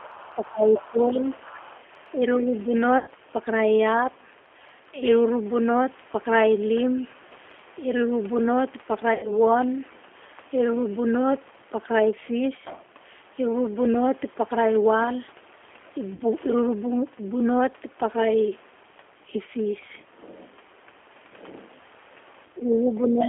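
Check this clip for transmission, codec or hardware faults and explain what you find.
There's a fair bit going on: the whole clip has the sound of a low-bitrate telephone codec, the opening seconds and the very end show echo-canceller trouble, and three short packet-loss dropouts are spread through the middle.

The G.729 codec runs the whole way through, and the damage is plainly audible. The speech is held inside a narrow line band of roughly 300 Hz to 3.4 kHz, so there is no real low end and nothing bright on top. Rather than carrying the waveform itself, this 8 kbit/s scheme rebuilds each 10 ms slice from a vocal-tract filter, a pitch estimate and a few pulses. That leaves the voice intelligible but grainy and slightly synthetic.

Speech suppressed in double talk shows up three times. From 0.35 to 1.52 s the talker sinks by about 15 dB at the deepest point. From 2.12 to 2.73 s there is a milder dip of about 5 dB. 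From 22.48 s to the end it pulls down by about 15 dB again. The likely cause is an echo canceller that couldn't tell the local voice apart from loudspeaker echo, so it turned both down while the two overlapped.

The other side's voice leaking through runs from 0.77 to 2.62 s as a faint second voice behind the talker, roughly 20 dB down. The likely cause is the far end playing out of a loudspeaker into the same microphone, with the echo canceller leaving a residue behind. That explains why it overlaps the first two suppression dips: the same overlap is confusing the canceller in both directions.

VoIP packet loss concealed by the speech codec happens at 2.98 to 3.08 s and 9.14 to 9.34 s, with 90 ms of audio missing each time, and at 16.14 to 16.22 s, with 60 ms missing. The decoder fills each gap by extending the last pitch and filter settings while fading the level, so you hear a brief buzzy, smeared stretch. 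Because every frame builds on the one before, the voice stays a little off for a moment after the stream picks back up.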